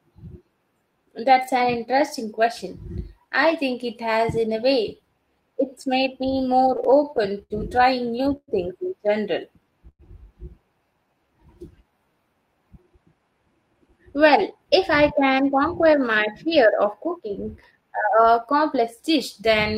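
Speech, with packet delivery faults from 6.3 s onward. From 6.31 to 7.53 s, packets kept arriving late and the jitter buffer repeatedly ran dry, causing repeated stalls (stutter): eleven short gaps, the longest 73 ms, are bridged by continuing the last sound, so the speech drags without losing anything. At 8.36 to 8.51 s and again at 9.89 to 10.02 s, packets were likely held up in transit, giving two call audio freezes in which a gap of about 110 ms is filled by the last sound fading into roughly 50 ms of silence, then the speech resumes where it stopped. From 10.94 to 12.13 s, a jitter buffer slow-down rebuilds its reserve by repeating pitch periods, adding 116 ms and slowing the speech to 91% at unchanged pitch. From 13.74 to 19.74 s, a jitter buffer speed-up trims an excess backlog by cutting short pitch-period pieces, removing roughly 0.4 s and hurrying the speech to 106% at unchanged pitch.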